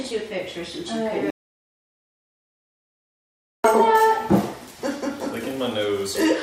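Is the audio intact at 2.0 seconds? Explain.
No. At 2.0 s the clip is inside an audio dropout to silence running from 1.30 to 3.64 s, losing 2.34 s. The input was likely cut off while zeros kept being written, so sound stops abruptly. Unlike a noise gate's dip, the gap holds no room tone at all.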